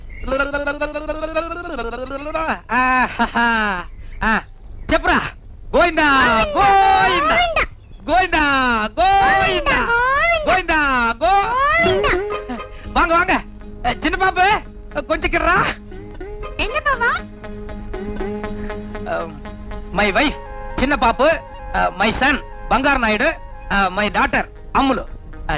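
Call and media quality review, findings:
No faults found on review; no action required.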